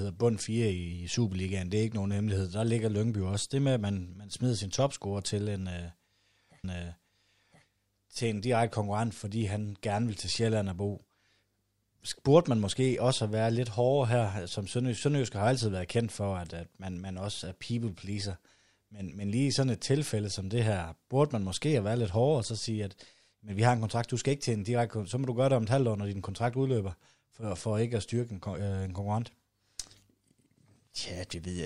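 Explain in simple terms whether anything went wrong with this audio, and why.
A stream segment repeated at 6.64 to 7.66 s: the player queued the same chunk of the speech twice, so about 1.02 s plays again just before "til en direkte konkurrent", with a small blip where it jumps back.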